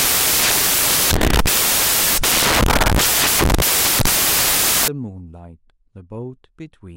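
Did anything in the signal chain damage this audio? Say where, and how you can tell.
Yes. The damage sits in sample-format conversion. From 0.0 to 4.88 s the speech carries loud, harsh broadband noise. These are samples built from the wrong bytes: mis-paired bytes put the jittery low bits on top.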